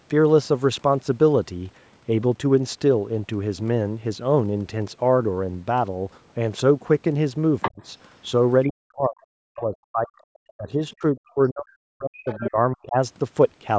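It's a speech clip, and the far end keeps creeping in: other side's voice leaking through at 7.62 to 7.83 s (nearly as loud as the talker), 8.63 to 8.70 s, 10.49 s, 10.9 s (both faint) and 12.29 to 12.49 s, likely echo the canceller didn't fully scrub from the loudspeaker pickup. Alongside that there's speech suppressed in double talk at 7.70 to 7.82 s, 8.70 to 10.14 s and 10.57 to 12.96 s, where the talker's voice drops very deeply, likely because the canceller couldn't tell near-end speech from echo and ducked both. The call's band limit, nothing above 8 kHz, is just the normal microphone processing.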